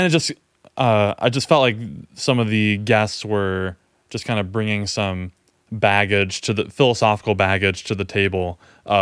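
Nothing goes wrong anywhere in this speech recording, so there's no technical fault to point to at any moment.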